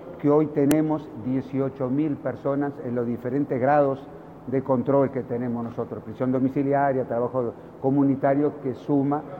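At 0.71 s there is a single sharp, loud click: a file header played as audio. A second piece was joined on without its header being removed, so those few dozen bytes were read as sample values, producing a brief snap unrelated to the surrounding sound.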